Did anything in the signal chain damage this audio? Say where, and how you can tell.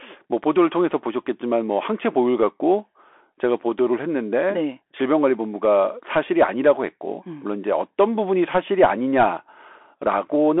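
Yes, at the codec stage: the speech passed through a Bluetooth CVSD headset codec, consistent with a 64 kbps one-bit link. Throughout, nothing survives above 3.8 kHz, with a 300 to 3400 Hz line band. The adaptive step lags loud, bright sounds, so s sounds turn scratchy over a grainy hiss.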